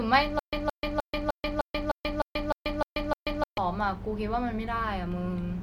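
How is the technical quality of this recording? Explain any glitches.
The recording has one clear glitch. A stutter with silent gaps runs from 0.39 to 3.58 s: a 169 ms fragment of speech repeats ten times, each followed by 136 ms of dead silence. The likely cause is a stalling stream that replays its last buffer on every retry.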